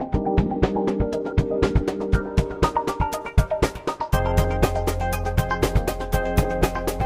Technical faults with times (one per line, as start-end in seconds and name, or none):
0.00-7.05 doubled audio track